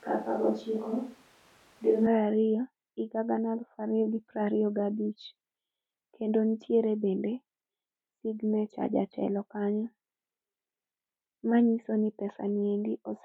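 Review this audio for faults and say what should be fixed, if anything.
From the start to 2.06 s the speech sounds roomy and hollow with thinner bass, then turns abruptly close and full, which points to a likely switch to a distant microphone. The level barely changes, but room noise sits roughly 30 dB below the speech. A spectrogram would show smeared, reverberant tails, a weaker low end and a raised noise floor until a sharp boundary at 2.06 s. Check that the close microphone is live and selected before recording begins.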